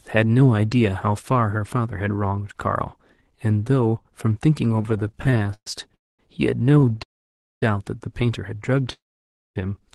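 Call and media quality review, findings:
Repeated stalls (stutter), 4.76–5.94 s: sound drags and judders through roughly 25 short holds, the longest 123 ms, about 31% of the span filled in. Jitter buffer repeatedly running dry on late packets; receiver extends the last sound each time. Nothing lost, timing stretched. Repeat at 6.72–7.01 s: 9 brief catches, longest 14 ms, about 32% filled.

Call audio freeze, 5.95–6.20 s: sound halts and trails into near-silence for about 210 ms, then resumes where it stopped. Likely packets held up in transit, jitter buffer empty, concealment fading out. 7.03–7.63 s: longer hang, about 560 ms quiet within a 589 ms pause; likely the same packet delay. 8.93–9.57 s: similar 629 ms stop, about 560 ms quiet; likely delayed packets again. Each adds a gap and loses nothing. Opus call path audible as top end ending near 12 kHz.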